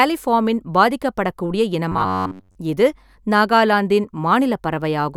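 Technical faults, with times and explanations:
1.92–2.56 s, robotic sound from repeated short buffers: a metallic buzz near 94 Hz before "இது நாகாலாந்தின்", likely an 11 ms chunk replayed while most real audio was skipped.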